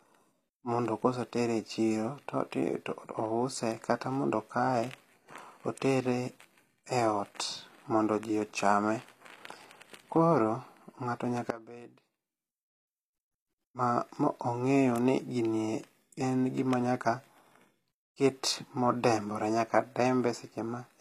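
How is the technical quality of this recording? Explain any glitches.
The recording has two audible faults: codec damage throughout and one sudden dropout.

Throughout, the treble is plainly damaged and nothing sounds above 14.9 kHz. Likely HE-AAC compression, around 24 kbps. Rebuilt, copied high bands leave sibilants gritty and metallic.

From 11.50 to 13.01 s, the sound drops by about 19 dB, leaving a faint residue. The likely cause is one channel inverted: shared content cancels when the channels are summed to mono.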